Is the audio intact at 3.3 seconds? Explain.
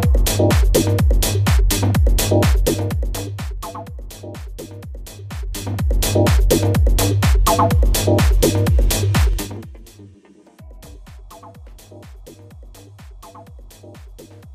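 No. At 3.3 seconds the audio is in the middle of a zipper noise fault that runs from 2.46 to 3.90 s. The level is being pulled down by roughly 20 dB, but not smoothly. It drops in 1 dB steps, about twenty of them each second. Each jump puts a tiny click into the waveform. Together the clicks form a fast ticking, zipping texture riding on the sound as it fades.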